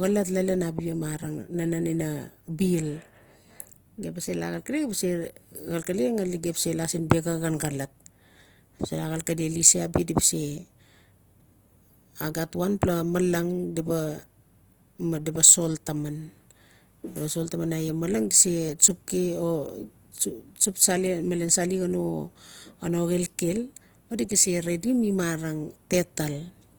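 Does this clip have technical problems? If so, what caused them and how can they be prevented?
Yes. Throughout, the speech sounds grainy and rough, with a noisy texture filling the high bands but little swirling, and content extends to 20.3 kHz. This is likely Opus compression in its music mode, where too few bits force bands to be filled with folded or noise energy, which fits a rate around 24 kbps. Encoding at a higher bitrate, or in a speech-oriented mode, would prevent it.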